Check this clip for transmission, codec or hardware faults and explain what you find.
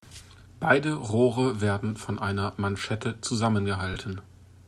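One fault shows up: a short dropout of lost LE Audio frames near the end of the speech, with the light lossy compression heard throughout staying subtle.

From 3.94 to 3.96 s, about 20 ms of audio is missing, which fits two 10 ms frames. The LC3 decoder fills the gap by replaying the previous spectrum with randomised signs, so the sound blurs into a brief noisy smear. A spectrogram shows a thin vertical patch where harmonic lines dissolve into diffuse energy, and the waveform shows a short, noise-like stretch.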